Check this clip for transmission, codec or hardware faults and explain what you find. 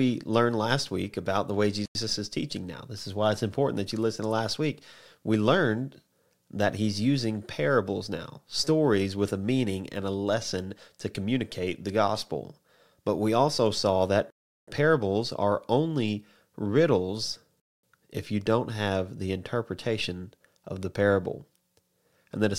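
The clip has three blocks of digital silence. At 1.86–1.95 s, 14.30–14.68 s and 17.60–17.83 s, the audio was replaced by zeros, most likely because the output buffer went unfilled, lasting 93 ms, 372 ms and 233 ms. The first two lengths fit 4096- and 16384-sample blocks. Each one cuts the speech abruptly to dead silence and back.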